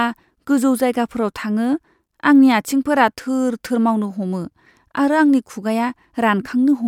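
No technical faults are audible.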